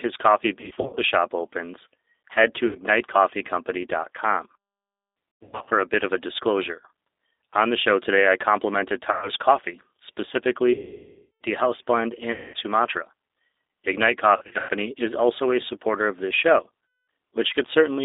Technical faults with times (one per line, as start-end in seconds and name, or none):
0.00-18.04 G.729 codec
0.61-1.01 VoIP packet loss concealed by the speech codec
2.67-2.78 VoIP packet loss concealed by the speech codec
5.39-5.72 VoIP packet loss concealed by the speech codec
9.12-9.30 VoIP packet loss concealed by the speech codec
10.73-11.41 VoIP packet loss concealed by the speech codec
12.32-12.56 VoIP packet loss concealed by the speech codec
14.37-14.71 VoIP packet loss concealed by the speech codec
16.98-17.01 VoIP packet loss concealed by the speech codec